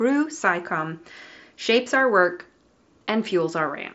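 A speech recording carried over a Bluetooth mSBC headset link, with nothing technically wrong with it.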